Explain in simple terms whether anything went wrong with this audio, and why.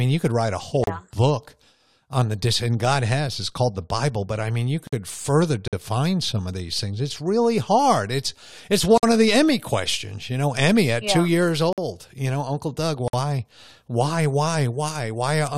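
The speech drops out briefly several times, and nothing is lost. It simply stops and restarts.

Four of the dropouts are a gap at a join of encoded pieces. They fall at 0.84 s (right after "could write a whole", before "yeah book on the"), 4.87 s (after "but I mean you"), 8.98 s (just before "of the") and 13.08 s. Each is a sudden hole of about 34 to 53 milliseconds, blurred at the edges. They come every 4 seconds. The recording was saved in 4-second pieces that were glued together without trimming the bit of silence each piece starts and ends with.

Two other dropouts are a gap between chunks, at 5.68 s and 11.73 s. Each is a 50-millisecond hole, six seconds apart. This points to the audio being delivered in 6-second chunks, with a little silence left between one chunk and the next.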